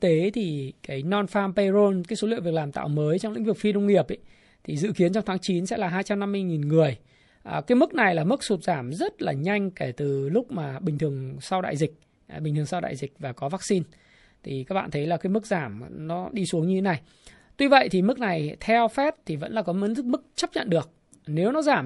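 From the first second to the end, the speech has a watery, swirling quality, most likely from MP3 compression. The codec damage is plainly audible, and its thinness fits a low bitrate of around 48 kbps. The encoder has too few bits, so it drops weak frequency lines and cuts the treble. On a spectrogram the top of the band stops at a flat ceiling, and the upper region shows holes that flicker on and off from frame to frame.

At about 20.35 s, a burst of pre-echo runs for 24 ms before a sharp attack. The quantisation noise sized for that loud onset is spread across the whole 48 ms block, and the encoder never switched to short blocks to contain it. The quiet moment ahead of the attack therefore fills with hiss about 15 dB above its surroundings, and the onset sounds smeared. A waveform shows a fuzzy smear just before the transient, and a spectrogram shows a broadband haze leading into it.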